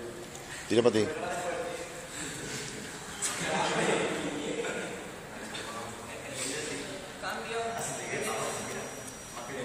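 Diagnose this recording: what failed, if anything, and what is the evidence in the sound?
An acoustic loop from loudspeaker back into the microphone was likely sitting right at the edge of feedback, with gain high enough to sustain one frequency but not to run away. From 7.61 s to the end of the clip, a thin, steady feedback whistle at 5.8 kHz rides behind the sound, roughly 20 dB below it and swelling and fading slowly in level. The fault lies in the analogue capture stage, before any conversion.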